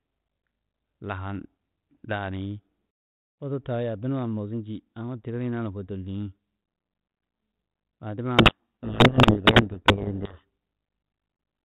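From 8.38 to 10.45 s, a codec payload misread: the receiver unpacks the 32 kbit/s G.726 code words in the wrong bit order, burying the speech in harsh distortion.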